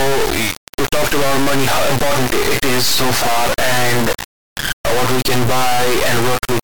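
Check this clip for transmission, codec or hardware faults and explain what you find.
Integer read as float runs throughout the clip. The speech was stored as 32-bit integers but decoded as 32-bit floats, so most samples become near-zero, invalid or enormous values. The output slams between silence and the clipping limit, giving an extremely loud, buzzing square wave that falls silent in the quietest moments.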